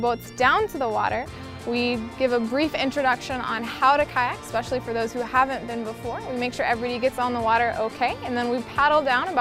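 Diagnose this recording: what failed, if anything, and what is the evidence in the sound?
No fault at any stage.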